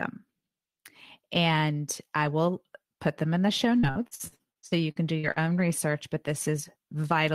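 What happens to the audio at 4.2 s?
At 4.2 s the audio is in the middle of a stretch of repeated packet loss (robotic sound), running from about 3.79 s to 5.39 s. Audio data keeps going missing or arriving too late, and each hole is papered over by extending the sound just before it, with the next hole following soon after. About a dozen short gaps, none longer than 49 ms, leave about a third of that span concealed, so the speech turns choppy, with pieces missing.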